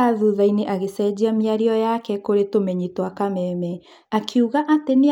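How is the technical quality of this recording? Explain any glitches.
Listening through the recording, nothing stood out as a technical problem, so there are no glitches to explain.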